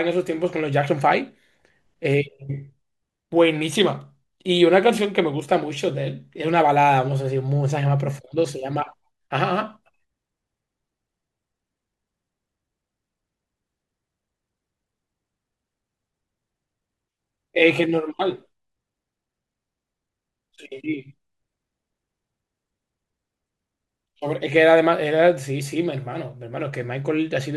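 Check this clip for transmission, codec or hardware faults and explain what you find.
No faults can be heard anywhere in the recording.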